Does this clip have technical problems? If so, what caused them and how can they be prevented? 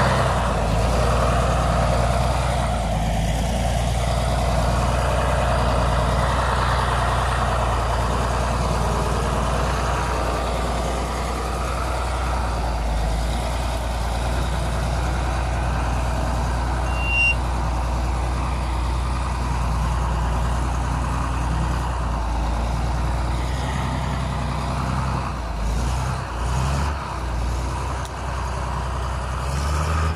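Yes. From 16.85 to 17.37 s a single piercing tone at 2.8 kHz swells out of the audio, climbing over a little under half a second until it sits a few decibels above the surrounding sound. This is loudspeaker feedback squeal. The microphone picked up the loudspeaker it was feeding, and at 2.8 kHz the loop's gain exceeded one, so that frequency kept reinforcing itself each time it went around. Lowering monitor gain, moving the microphone out of the loudspeaker's coverage, or notching 2.8 kHz would prevent it.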